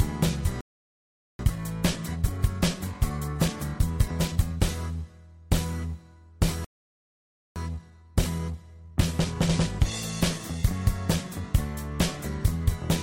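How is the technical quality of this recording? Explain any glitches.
The recording has two playback stalls, each followed by a stretch of time-compressed catch-up.

Playback stall, 0.61 to 1.39 s and 6.64 to 7.56 s. The audio cuts to silence for about 0.8 s, then 0.9 s. The player likely starved of data.

Time-compressed catch-up, 1.39 to 4.39 s and 7.56 to 10.56 s. The player trims its backlog by splicing out tiny pieces. The sound runs 1.15 times, then 1.1 times fast, at normal pitch.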